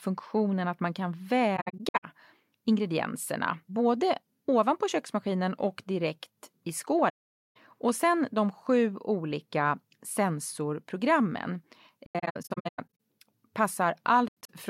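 AAC frame loss with muting at 1.56, 7.09, 12.06 and 14.28 s: the decoder zeroed the missing frames, so the speech fades into soft-edged gaps, some broken into brief dropouts.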